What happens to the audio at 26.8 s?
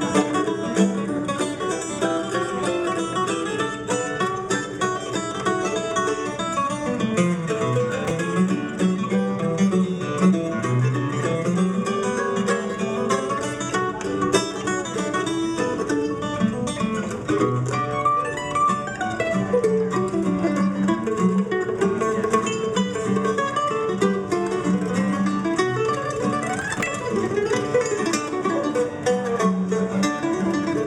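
A burst of processor overload crackle runs from 26.62 to 26.88 s. Around twenty buffers of roughly 10 ms each miss their deadline and are skipped, leaving hard-edged gaps that sound like gritty tearing. The waveform shows jagged breaks, and the spectrogram shows dense vertical broadband streaks.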